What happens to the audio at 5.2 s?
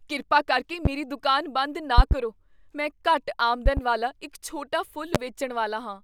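A loud pop hits from 5.15 to 5.18 s, right after "ਵਾਲਾ ਇੱਕ ਛੋਟਾ": one sharp thump roughly 25 dB above the speech, likely a voltage pulse from a switch or static. The speech carries on underneath, so nothing drops out.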